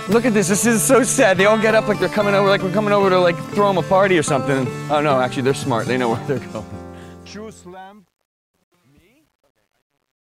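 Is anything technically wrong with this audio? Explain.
Yes. Truncation distortion on a fade runs from 6.07 s to 10.26 s. The fade-out that begins around 6 s is handled with too few bits and no dither, which fits about a 10-bit word, so the fading waveform collapses into coarse square steps. From 7.48 s it turns gritty. Unlike a noisy fade, the grit follows the signal and vanishes with it.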